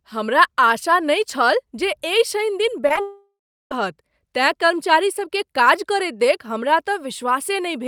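Repeated packet loss (robotic sound) runs from 2.87 to 2.98 s: short gaps up to 11 ms are patched by extending prior sound, covering a third of that stretch and sounding choppy.

A long network dropout follows from 3.01 to 3.72 s, likely caused by audio never arriving. About 0.7 s is lost: a fading continuation of the last sound gives way to 0.36 s of silence before the audio resumes.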